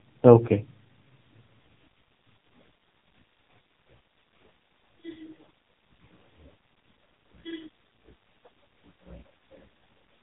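From start to finish the speech carries the signature of the AMR narrowband mobile codec, the AMR-NB coder used on 2G and 3G calls. Nothing above 3.8 kHz survives, so sibilants lose their edge and the sound is boxed into the telephone band. The damage is heavy: the thin, buzzy, synthetic quality fits a very low mode, around 5.15 kbps, where the vocal-tract model is fed too few excitation pulses per subframe to rebuild the voice convincingly.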